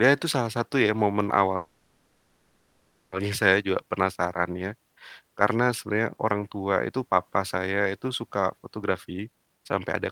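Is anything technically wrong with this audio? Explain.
Yes, there are two kinds of fault, a call audio freeze and two jitter buffer speed-ups.

From 1.56 to 3.13 s, right after "salah satu ya momen", there is a call audio freeze. The likely cause is delayed packets draining the jitter buffer, so the receiver extended the last sound as a fading buzz or hiss for about 1.56 s. When delivery resumed with "saya juga penasaran ya", the audio picked up where it stopped. Nothing was lost, but that gap now sits inside the speech and pushes everything after it later.

The jitter buffer speed-ups follow. The buffer had built up more audio than its target, so the receiver trimmed repeated pitch-period-sized slices to shrink the backlog. The speech runs faster while keeping its pitch. From 5.22 to 6.31 s, between "saya juga penasaran ya" and "tua itu papa saya", the rate is 107% and a few tens of milliseconds are removed, which sounds slightly hurried. 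From 8.83 to 10.09 s, after "papa saya itu suka", the rate is 131% and roughly 0.4 s is cut, so the speech sounds clearly rushed.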